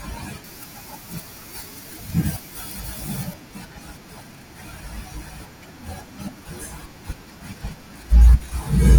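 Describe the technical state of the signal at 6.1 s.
At 6.1 s the speech signal is intact, with no audible fault at that moment.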